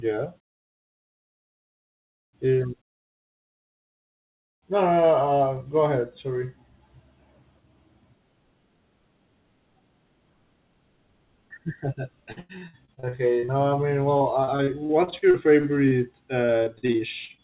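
Repeated packet loss (robotic sound) hits at 12.32–13.51 s, 14.17–15.94 s and 16.45–17.41 s. Each stretch has around ten gaps, none longer than 94 ms, patched by stretching the last sound, so the speech turns choppy and robotic. The speech comes through a band-limited call path, with nothing above 4 kHz (consistent with G.711 mu-law at 64 kbps).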